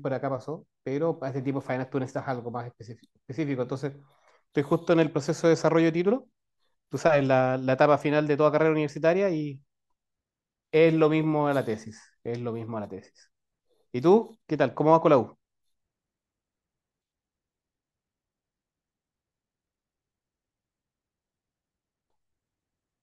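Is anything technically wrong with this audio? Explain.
No, the speech signal has no technical faults.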